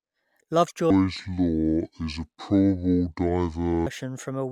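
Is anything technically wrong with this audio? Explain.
Yes. From 0.90 s to 3.87 s there is a section at the wrong speed. That stretch was likely played against the wrong clock, running at 0.589 times its recorded rate. Because speed and pitch are tied together, the speech in that span drags slowly and drops by about ten semitones, sounding deep and sluggish. Normal speed and pitch snap back just before "from a".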